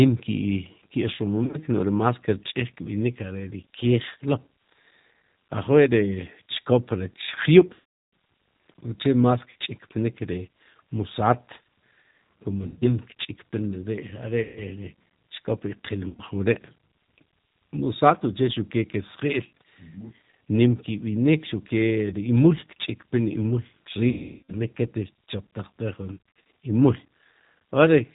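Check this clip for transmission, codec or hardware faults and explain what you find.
Two faults are present: a steady low-bitrate codec sound across the whole recording, and eight short breakups where lost audio has been papered over.

Throughout, the speech sounds slightly rough, thin and synthetic, with nothing above 4 kHz. This is the G.729 codec damage, and it is plainly audible. The codec doesn't store the waveform. It resends a vocal tract filter, a pitch predictor and a few pulses per frame, which fits an 8 kbit/s G.729A stream. The lost fine detail gives the artificial texture.

At 1.44, 7.74, 9.50, 12.67, 14.43, 16.09, 24.09 and 26.12 s, the speech smears into a buzzy, held tone or a coloured hiss that fades, then comes back weak or distorted before recovering. This is VoIP packet loss concealed by the speech codec. The decoder fills each missing stretch by repeating its last pitch and filter at falling gain. 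The lost audio runs from 60 ms at 9.50 s to about 400 ms at 24.09 s, with the 7.74 s dropout close behind. At 1.44 s, 80 ms is scattered over 100 ms, and at 26.12 s, 230 ms is scattered over 340 ms. Because each frame builds on the one before, the voice stays impaired briefly after packets return.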